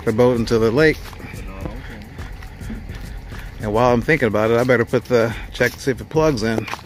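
A single loud pop at 1.66 to 1.69 s jumps somewhat above the sound, which carries on beneath it, likely a brief voltage spike from a plug, switch or static.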